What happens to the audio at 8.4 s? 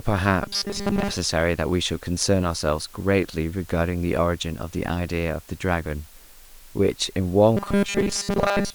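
At 8.4 s you're inside a stretch of robotic sound from repeated short buffers that runs from about 7.57 s to the very end at 8.75 s. The speech turns into a stiff, metallic buzz locked at 200 Hz, still loosely tracking the words. That pitch fits a tiny chunk of about 5 ms being replayed over and over, most likely because fresh audio was arriving too slowly, so most of what's heard there is repeats and the real audio gets skipped.

Underneath that, and through the whole clip, there's the low bit depth with dither. The sound sits at 8 bits, and the dither noise added before rounding turns the quantization error into a flat, even hiss instead of grainy distortion. Here it sits roughly 25 dB below the speech level, so the hiss runs behind the buzz at 8.4 s too.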